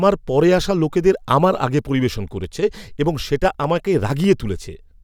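From 0.64 s to 4.84 s the speech carries a click every 0.6 s, about seven in all, with the even spacing of clock drift buffer slips. This is likely two devices on independent clocks that disagree by roughly 500 ppm, so the buffer between them drifts until a short block, around 15 samples, is dropped or repeated. Packet loss or dropouts land at irregular moments and leave gaps. These clicks are brief and keep strict timing.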